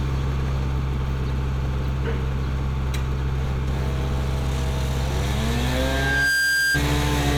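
At 5.75 s a loudspeaker feedback squeal kicks in and runs until about 6.83 s. You hear a single tone at 1.6 kHz swell up over roughly half a second until it sits a bit louder than the rest of the sound. What's happening is the mic is hearing the speaker it's driving, and at that one frequency the loop gain tipped past unity, so the tone just kept feeding itself until it stopped.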